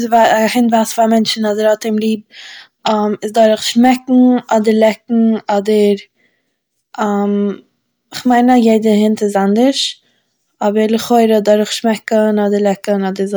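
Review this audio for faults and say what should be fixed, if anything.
Hard clipping affects this speech at 0.14–0.33 s, 8.31–8.74 s and 11.12–11.53 s. The peaks overran the stage's limit by about 2 dB and then about 1 dB, and their tops were sliced flat. That adds high harmonics heard as brief crackle on loud syllables. Soft saturation rounds peaks more gently. Leave more headroom by lowering gain before the converter.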